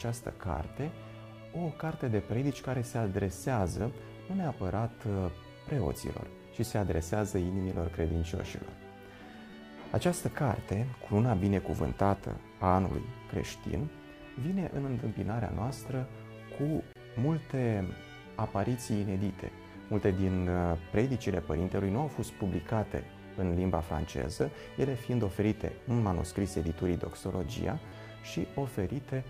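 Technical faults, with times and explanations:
3.80 s, 9.50–9.53 s and 27.88–27.92 s: repeated buffer. Each time, new audio arrived late and the device replayed its last block of about 10.7 ms, which fits a 512-sample buffer. It played once more at 3.80 s, twice more at 9.50 s and four times more at 27.88 s, and roughly 10, 20 and 40 ms of sound were lost. On a waveform they show as identical copies of one segment, with a hard step at each join. On a spectrogram they show as thin vertical lines.
16.93–16.96 s: gap at a join of encoded pieces. A silence of about 28 ms cuts into continuous sound, and the sound then resumes from where it stopped. Two separately encoded pieces were joined without trimming, so the encoder's start-up delay and the padding of the final frame both remain. On a waveform this is a flat stretch with abrupt, slightly smeared edges. On a spectrogram it is a narrow empty band across all frequencies.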